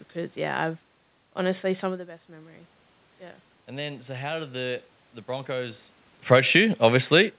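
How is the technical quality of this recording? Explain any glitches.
One real glitch, right at the end of the speech, heard through a narrow call band that stops around 4 kHz, which fits a G.711 mu-law path at 64 kbps.

From 6.17 s to 7.39 s there's automatic gain falling. The gain control judged the input too hot or its background noise too strong and eased its gain down gradually, so the level sinks steadily to the end and the room noise behind it drops right along with it.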